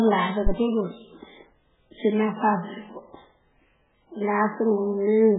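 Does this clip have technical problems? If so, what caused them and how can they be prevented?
Yes. Heavy MP3 compression is the likely cause: a starved encoder, pointing to roughly 8 kbps, cuts everything above 3.8 kHz and leaves the speech watery and swirling throughout. Encoding at a much higher bitrate, or keeping a lossless copy, prevents it.

A phantom power thump occurs from 0.47 to 0.52 s: supply voltage switched on a live input steps through the coupling capacitors, giving a deep thud decaying in about 13 ms. Muting the channel before switching phantom power prevents it.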